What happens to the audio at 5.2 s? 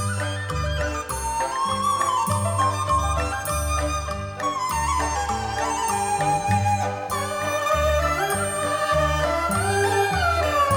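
Nothing goes wrong at 5.2 s: the audio plays through that moment intact, with no dropout, click, glitch or other fault.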